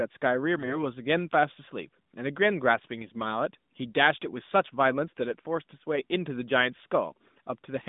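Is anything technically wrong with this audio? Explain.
Yes. From 0.58 to 0.78 s the speech suffers AMR bit errors. The link corrupted a run of frames, which fits about six 20 ms frames. The lightly protected bits were flipped at a rough rate of one in ten, but the checks on the critical bits still passed, so the decoder used them. The excitation pulses landed in the wrong positions, and the fine gain and spectral values went astray. The voice keeps its rough pitch and level but turns hoarse and gargly for that fifth of a second, heard through the narrowband AMR mobile line.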